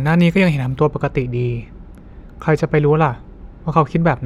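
From 0.77 s to the end of the speech, de-emphasis has been applied wrongly: a treble cut meant to reverse pre-emphasis was applied to audio that had none, or was applied twice. The response falls away steadily above 1 kHz, down about 14 dB at 10 kHz, so sibilants and consonant detail lose their edge and the speech turns dull and muffled. Unlike a low-pass filter or codec band limit, there is no sharp cutoff, only a smooth, progressive dulling.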